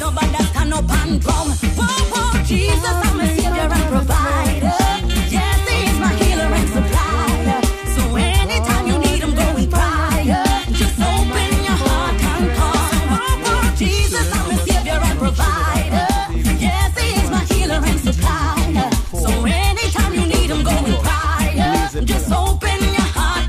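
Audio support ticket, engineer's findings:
No faults found on listening; the signal shows no dropouts, glitches, distortion or level anomalies that would point to a failing component.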